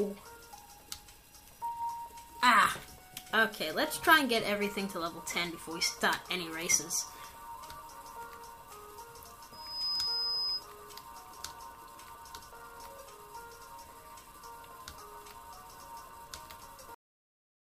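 At 9.52 s a loudspeaker feedback squeal kicks in and runs to about 10.64 s. The mic is hearing the speaker it drives, and at 5 kHz the loop gain tips past one, so that single frequency feeds on itself. You hear a thin, piercing tone swell up over roughly a third of a second until it's sitting about as loud as the rest of the sound, then it holds there as a steady high whistle until it stops.

Then at 16.95 s there's a cut-off end. The final stretch of audio never got written out, so the sound just stops mid-flow and drops straight into dead digital silence. There's no tail or natural decay at all, just an abrupt halt that feels like someone yanked the cable, and nothing comes back for the rest of the clip.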